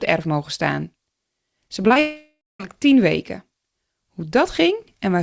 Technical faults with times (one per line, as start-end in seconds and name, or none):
1.68-1.97 repeated packet loss (robotic sound)
1.99-2.61 long network dropout